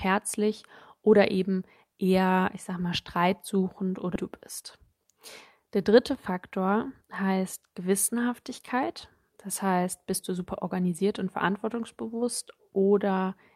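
At 4.15 s, just after "ich sag mal streitsuchend", a skip ahead occurs: roughly a second of speech was discarded while later audio was already queued, so playback jumps forward with no gap and the two sides are butted directly together.

Two jitter buffer speed-up episodes follow. The buffer held more audio than its target, so the receiver trimmed short pitch-period pieces repeatedly, about a tenth of a second in each episode. From 4.63 to 5.19 s the speech runs at 119% speed, and from 5.60 to 7.38 s at 106%. Both sound hurried but keep their pitch.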